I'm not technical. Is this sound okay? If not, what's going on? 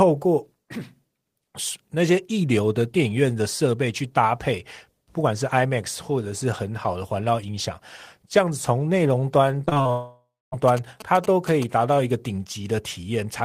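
No, there's a rough patch a little under two seconds long near the end, with three separate problems one after another.

From about 9.65 to 9.91 seconds you get repeated packet loss, which gives a robotic sound. Small pieces of the audio went missing five times in quick succession, each gap lasting at most a few hundredths of a second. Each time, the receiving end filled the hole by stretching out the last bit of sound it had. Nearly half of that short stretch is patched-over filler, which is why the speech turns choppy there.

Right after that, from about 9.91 to 10.54 seconds, the audio cuts out. That's most likely a long network dropout, where nothing at all got through for a little over half a second. At first you hear a smeared continuation of the last sound fading away, and for the final quarter of a second or so there's just silence. When the speech comes back, that chunk is simply gone.

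Then, from about 10.68 to 11.64 seconds, there's a galloping dit-dit-dit buzz. Those are GSM signalling bursts: an older 2G mobile phone nearby is talking to its network, and the recording equipment picks up the radio pulses as short bursts of a low buzz repeating about 217 times a second. It's quite noticeable, not far below the speech in loudness.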